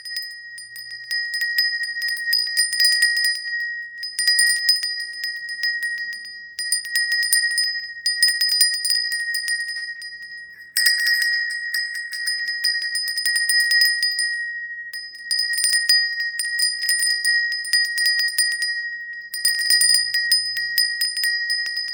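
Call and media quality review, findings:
Sound held too long with a slight buzz or dip, 9.77 to 9.84 s. Short stall from a late packet: jitter buffer ran dry, last sound stretched about 45 ms, nothing lost.

Brief smear or wobble at 9.96 to 10.00 s. Short concealed packet loss: 20 ms never arrived, decoder extrapolated the preceding sound to cover the gap.

Rough, muffled, watery audio from 10.54 to 13.98 s. Call bitrate drop: Opus forced from 96 to 17 kbps, coarser coding and lost highs, worst for about 1.6 s.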